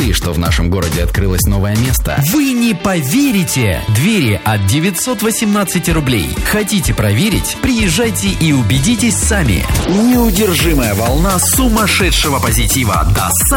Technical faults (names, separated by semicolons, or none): periodic clock jitter